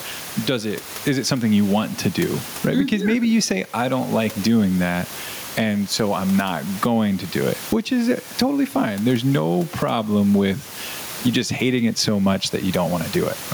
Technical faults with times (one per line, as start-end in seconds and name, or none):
0.00-13.53 gain pumping